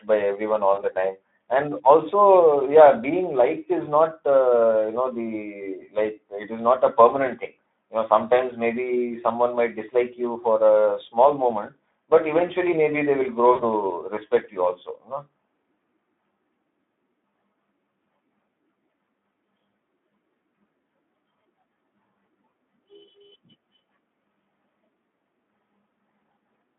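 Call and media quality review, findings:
Hoarse, noisy speech throughout, band-limited to roughly 250 Hz to 3.5 kHz. Speex codec: starved CELP excitation leaves noisy, hoarse voicing; the damage fits a low setting near 11 kbps on a narrowband line.

Brief smear at 0.73–0.83 s, and a longer fading stretch with weak recovery at 13.51–13.63 s. VoIP packet loss concealed by the speech codec: the decoder extrapolates its last pitch and filter at falling gain. The gaps fit about 40 ms and 80 ms of lost frames.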